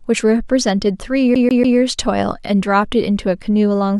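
From 1.35 to 1.78 s, a 144 ms slice of speech repeats three times in a rapid, even stutter with tiny mutes: a CD stuck on one turn, its laser jumping back each rotation.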